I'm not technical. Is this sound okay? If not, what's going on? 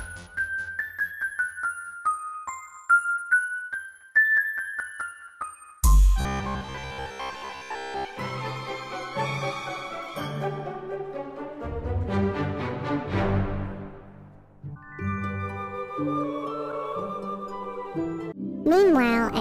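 No. From about 6.21 to 8.05 s there's robotic sound from repeated short buffers. New audio likely stopped arriving in time, so the playback software filled the gaps by replaying the last tiny slice, about 15 ms long, over and over, and most of the real sound in that stretch was skipped. Those rapid repeats lay a steady, metallic buzz of about 67 Hz over everything, so the sound turns stiff and machine-like until it recovers.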